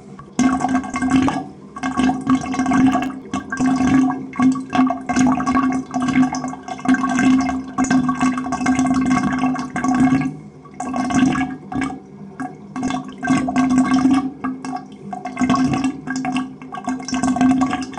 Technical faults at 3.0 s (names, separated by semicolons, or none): processor overload crackle